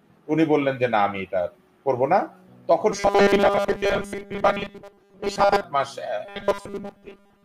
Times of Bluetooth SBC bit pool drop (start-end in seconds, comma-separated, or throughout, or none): none